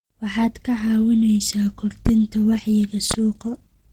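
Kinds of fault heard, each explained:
Opus compression: throughout, the speech is grainy and plainly hoarse, with noise filling thin bands, likely from low-rate Opus in hybrid mode at about 16 kbps.
Loud pop: at 2.06 s, just after "ka caawinaysaa", and at 3.11 s, a sharp pop about 15 dB above the speech, likely a sudden voltage pulse.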